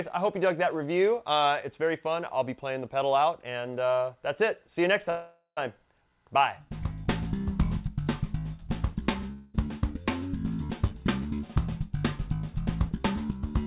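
At 5.1 s there's a call audio freeze lasting until about 5.59 s. The sound gets stretched into a fading buzzy fill for roughly 0.47 s, and the last 0.12 s or so of that is silent before things pick up again right where they left off. Nothing is actually lost, but everything after that point runs about 0.47 s late. It's likely the jitter buffer ran dry while packets were held up in transit.

Then at 9.32 s comes a long network dropout, running to about 9.56 s. This time the fill is shorter, around 0.21 s of decaying buzz with no silent tail. When the audio comes back it has skipped ahead, and about 0.22 s of material never turns up. The likely cause is packets that simply never arrived, so the receiver papered over the hole and then jumped forward. Both gaps sit on top of the call path's narrow band, with nothing above 4 kHz, which fits G.711 mu-law at 64 kbps.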